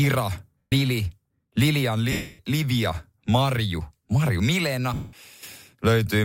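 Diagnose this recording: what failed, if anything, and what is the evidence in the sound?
Codec stage, lost LE Audio frames: at 0.58–0.72, 2.12–2.39 and 4.94–5.13 s the LC3 decoder refills the gap with the last spectrum with random signs, a noisy smear fading toward silence that shows as a blurred spectrogram smear.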